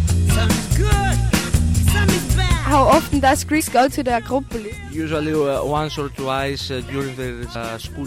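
Compressed frames skipped at 3.59 s and 7.54 s: whole frames were lost, so the audio jumps ahead by around 70 ms, then 200 ms.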